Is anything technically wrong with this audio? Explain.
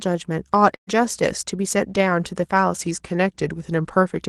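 Yes, there are two faults.

From 0.75 to 0.90 s there is a burst of packet loss. A run of packets on the call link never arrived in time, so the receiver had nothing new to play. It stretched the last received sound forward and faded it down, so the speech turns into a brief held, dimming sound that sinks toward silence. The speech then picks up again with roughly 120 ms of material gone.

From 2.82 to 4.21 s, a drift correction step is the likely cause of a sudden slowdown. Clock-matching software appears to have changed the playback rate in a single jump, about 5.4% slower, to rebalance its buffer. Because speed and pitch move together, the speech drops by about 97 cents, close to a full semitone, and sounds both slower and lower until the rate snaps back near the end. Throughout, the Opus call path limits the audio to about 12 kHz.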